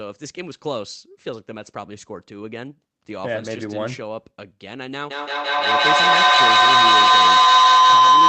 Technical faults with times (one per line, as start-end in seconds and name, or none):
5.10-8.29 feedback howl